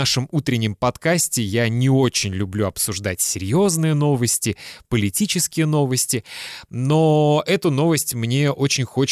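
Nothing in the signal stands out as a technical fault anywhere in this speech recording.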